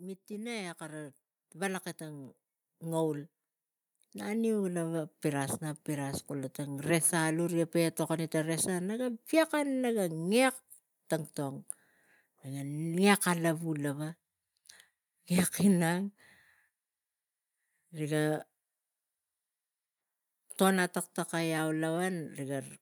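From 0.27 s to 14.1 s the automatic gain rises: the gain control judged the speech input too quiet and kept increasing gain, by about 14 dB overall. Voice and background noise climb together in a slow, steady swell across those fourteen seconds.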